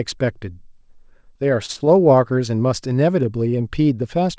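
A speech recording carried over a call path, with nothing above 8 kHz, consistent with G.722 at 64 kbps. From 1.66 to 1.71 s there is a short stall from a late packet. The jitter buffer ran dry, so the last sound is held for about 26 ms, then resumes where it stopped. From 1.73 to 1.86 s comes a short concealed packet loss. About 20 ms never arrived and was patched by extending the previous sound, heard as a brief smear.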